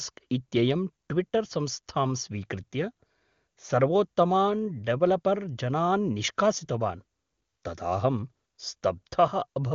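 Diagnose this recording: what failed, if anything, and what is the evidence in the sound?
Nothing has gone wrong here: the speech comes through an AMR wideband (HD Voice) path, with the top of the band stopping at about 7.2 kHz as that codec is built to do, and any coding traces are faint at most, which fits the highest AMR-WB bitrate.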